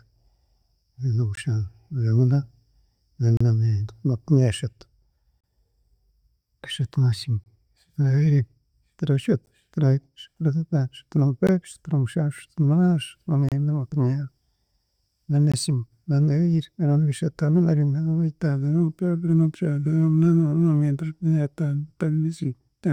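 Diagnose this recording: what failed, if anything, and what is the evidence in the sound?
Gaps between stream segments at the streaming and playback stage: hard-edged silences land at 1.35, 3.37, 5.41, 7.44, 9.46, 11.47, 13.49 and 15.52 s, every 2 s. Segment timestamps don't quite meet, so the player pads 10 to 33 ms of silence. Nothing's actually lost.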